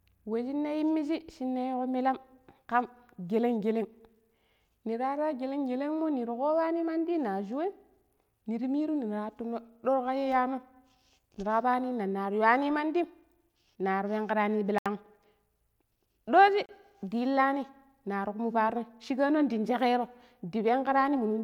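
At 14.78 s, right after "nari penki rani", the speech drops to silence for 73 ms, then again at 16.66 s for 32 ms: a Bluetooth stall, likely from interference starving the headphone buffer. Both show as flat-line gaps in the waveform and blank vertical strips on a spectrogram.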